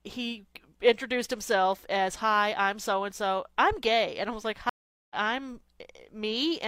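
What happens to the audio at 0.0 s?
Nothing goes wrong at 0.0 s: the speech begins cleanly and is intact at that moment.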